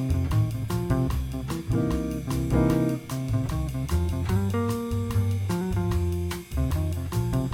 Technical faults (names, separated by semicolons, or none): none